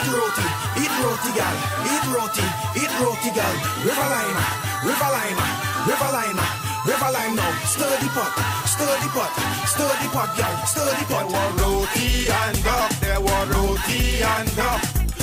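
Throughout the clip there is clock drift between sender and receiver. The sender's clock runs roughly 4 percent fast, so the receiving buffer keeps overfilling and small slices get trimmed away. The result is faint, unevenly spaced hiccups, all skips forward. Unlike packet loss, there are no dropouts or silent gaps.

From 10.43 to 15.15 s, repeated timing corrections push the sound along at about 103 percent speed. The receiver keeps cutting short pieces to catch up, so the tempo feels slightly hurried and unsteady. A smooth resampled speed-up would sound even, whereas here the effect comes from many tiny, irregular jumps.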